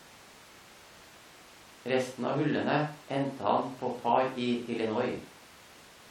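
Nothing stood out on listening to this speech recording.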